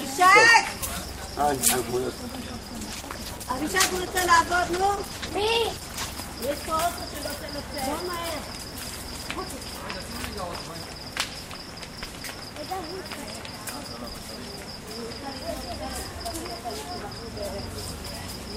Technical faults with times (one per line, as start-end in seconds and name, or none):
2.54-6.23 call bitrate drop